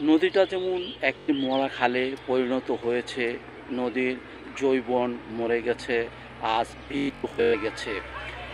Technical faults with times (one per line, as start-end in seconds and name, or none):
1.19-1.29 Bluetooth stutter
6.97-7.54 Bluetooth stutter